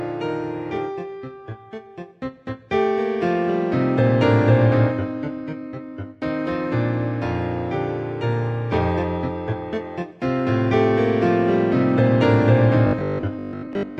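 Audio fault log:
12.87–13.99 s, robotic sound from repeated short buffers: the sound turns into a rigid, metallic buzz pitched at 50 Hz that only loosely tracks the audio. The likely cause is new data arriving too seldom, so a 20 ms stretch is replayed over and over while most of the real audio is skipped.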